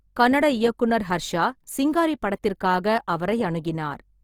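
Right from the start and all the way through, the speech carries a grainy, rough coating that sounds like Opus compression, likely at a low rate around 24 kbps. The encoder keeps each band's energy but runs short of bits, so it fills the fine detail with folded copies of lower bands or plain noise. That's why tones come out noisy and sandpapery rather than swirly. The damage is easy to hear, though the top end still reaches about 20.2 kHz, so the sound never goes muffled.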